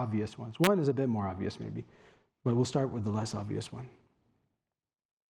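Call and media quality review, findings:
Integer overflow, 0.64 to 0.67 s. Violent crack on a loud speech peak, harsher than clipping. Peak exceeds full scale by about 1 dB. Probable component: gain or mixing stage without saturation.

Mechanism: the sum passes the largest integer and wraps to the opposite sign instead of being limited. Each over-range sample jumps across the whole range. Fix by clamping before conversion.

Call bitrate drop, from 1.63 s to the end. Speech turns rough and watery. Top end muffled. Encoder bitrate falls from 64 to 16 kbps. Lowest rate held about 1.7 s. Probable component: bandwidth estimator feeding the Opus encoder.

Mechanism: estimated bandwidth fell, so the encoder got far fewer bits. Coarser coding plus a high-frequency cutoff at this low rate. No recovery before the clip ends.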